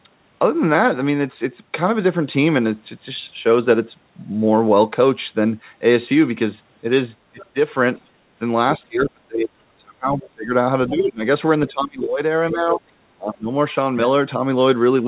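Speech with speech suppressed in double talk at 7.32–7.56, 8.78–10.53, 10.89–11.23, 11.68–12.21, 12.52–12.82 and 13.15–13.5 s. The level dips by about 10 to 30 dB, deepest across the long stretch near 9–10 s, likely because an echo canceller turned everything down while both sides spoke. These show as sudden hollows in the waveform envelope and faded bands on the spectrogram. The other side's voice leaks through briefly at 7.4 and 10.23–10.3 s, about 25 dB below the talker, as faint traces layered under the main voice on the spectrogram. Throughout, the spectrum stops at 4 kHz, as expected on a narrowband call path.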